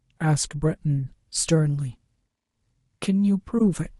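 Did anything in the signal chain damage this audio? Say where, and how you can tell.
Yes. The damage is at the codec stage: a corrupt frame decoded, twice in this speech. A faint blip sits at 0.98 s. A much louder burst runs from 3.58 to 3.62 s. Each spans about one frame. Flipped bits misled the decoder, which placed energy at the wrong frequencies.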